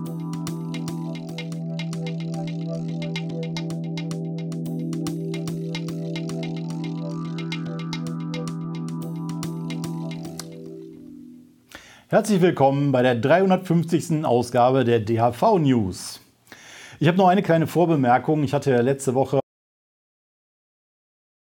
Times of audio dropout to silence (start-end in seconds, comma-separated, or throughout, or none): 19.40-21.58